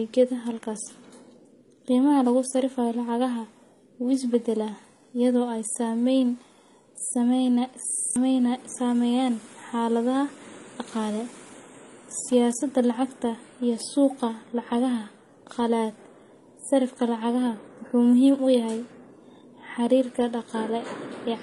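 Speech here, and the whole thing has that smeared, doubly processed texture: nothing above 12.8 kHz, plus a mix of swirly, watery artefacts that sounds like transcoding between lossy codecs. It's likely a low-rate MP3 re-encoded to HE-AAC, with the second codec stacking its own artefacts on the first's. Then at 7.92 to 8.16 s there's a system hang loop: one 40 ms slice repeats six times, giving a rough 25 Hz stutter-buzz, and roughly 200 ms of real audio goes missing underneath it.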